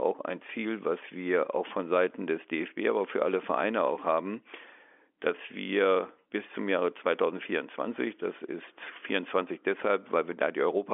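No faults are audible: the speech sits in a narrow telephone band from 300 Hz to 3.4 kHz with nothing above about 3.6 kHz, as expected from 64 kbps G.711 mu-law coding, and any coding damage is faint at most.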